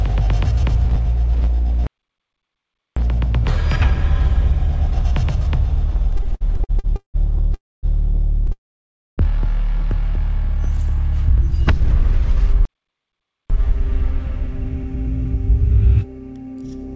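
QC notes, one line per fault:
1.87–2.97 s and 12.65–13.50 s, playback stall: The sound stops in mid-flow and the output goes silent. The first gap lasts about 1.1 s, the second about 0.85 s. The likely cause is a player that ran out of data or had its thread blocked, so nothing reached the output until it recovered.
6.12–7.16 s, repeated stalls (stutter): Eleven short hold-ups come in quick succession. Together they add 440 ms of filled sound, 42% of this span, and the longest is 180 ms. The jitter buffer kept running dry as packets arrived late. Each time, the receiver stretched the last sound to cover the wait, fading it in the longer ones. Nothing is lost, but the audio drags and stutters.
7.54–7.85 s and 8.52–9.20 s, call audio freeze: The sound halts and its last fragment trails off into silence. The first freeze fills 290 ms, 240 ms of it silent. The second fills 660 ms, 610 ms of it silent. 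Playback then carries on from the same point, so the call delay grows by those amounts and nothing is skipped. Packets were likely held up on the way, emptying the jitter buffer. Through the G.722 path, nothing is heard above 8 kHz.
10.36–12.12 s, jitter buffer slow-down: The audio runs at about 97% speed with the pitch unchanged. Sounds are slightly drawn out. The receiver was rebuilding its reserve, so it repeated single pitch periods and slivers of pauses many times over. That adds 60 ms across the stretch. It sounds like a gentle dragging rather than a gap.
13.70–16.84 s, jitter buffer speed-up: The audio runs at about 104% speed at the same pitch. Audio had piled up in the jitter buffer beyond its target. To cut the excess delay, the receiver trimmed tiny pieces of one or a few pitch periods again and again. Around 150 ms is removed across the stretch.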